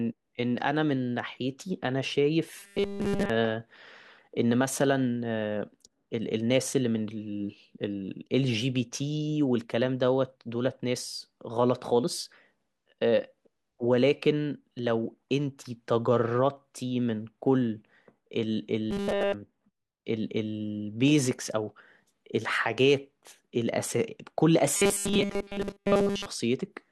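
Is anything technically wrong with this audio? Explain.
Yes. The speech turns robotic three times: 2.60 to 3.30 s, 18.91 to 19.34 s, and 24.77 to 26.26 s. This is robotic sound from repeated short buffers, likely caused by fresh audio arriving too seldom, so playback loops a 5 ms fragment while essentially all the real signal is skipped. That loop imposes a fixed 200 Hz buzz, heard as a rigid metallic drone that only loosely tracks the speech.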